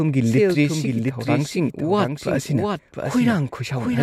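From the start of the speech to the end, a doubled audio track is present: a second, full-band copy of the whole signal trails the original by roughly 0.7 s, sitting about 5 dB below it. The copy carries no reverberant tail or room colouring, so it reads as a distinct, out-of-step repeat rather than an echo. The likely cause is the same audio being captured again through a slower path and mixed back in.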